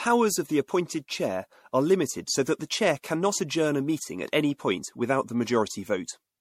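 From start to finish the speech has a swirly, hollow, smeared quality, with consonant attacks blurred. It is likely generation loss: the audio was decoded and re-encoded with MP3 around seven times, each pass quantising on a shifted frame grid so the damage compounds. The sound points to a chain near 64 kbit/s. A spectrogram shows nothing above 16.5 kHz, plus flickering holes and pre-echo smear around onsets.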